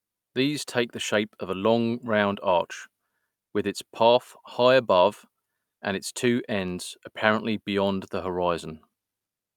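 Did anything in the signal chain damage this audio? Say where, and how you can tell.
No, no signal-chain damage audible.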